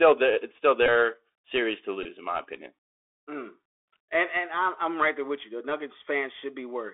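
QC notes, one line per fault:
throughout, Bluetooth CVSD headset codec: the link codes the audio one bit per sample at 64 kHz, stepping up or down with an adaptive step, within a 300 Hz to 3.5 kHz band. Loud high content outruns the step, so s sounds turn scratchy over a granular hiss.
0.86 s and 2.03–2.06 s, Bluetooth headset packet repeated: voice packets were lost and the chip replayed the last good packet's bits. That makes a short buzz near 267 Hz, one repeat every 3.75 ms. The first comes just after "the it's still", and 18.8 ms fits about five repeats. The second follows "series to" and runs into "in my opinion".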